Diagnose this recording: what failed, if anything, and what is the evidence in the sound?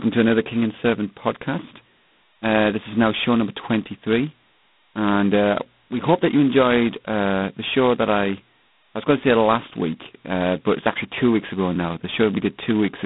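G.726 ADPCM damage runs throughout this speech: nothing above 3.9 kHz, and a harsh, rasping hiss tracks its level, which fits coarse 16 kbit/s coding.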